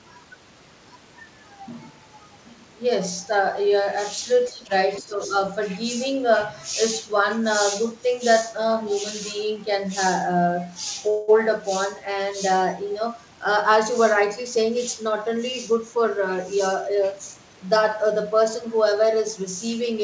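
Around 4.51 to 4.72 s the speech ducks hard, down by roughly 20 dB, then again from 5.0 to 5.35 s by about 10 dB. That's likely speech suppressed in double talk, with the echo canceller pulling down the near talker while the far side spoke.

At 11.1 to 11.3 s there's a call audio freeze: a 180 ms stretch of the last sound hangs and fades, probably from late packets draining the jitter buffer. Nothing gets lost; the audio just picks up where it stopped.

From 14.22 to 17.35 s a jitter buffer speed-up kicks in, playing about 5% fast at unchanged pitch. Around 150 ms gets trimmed, so the speech sounds slightly hurried.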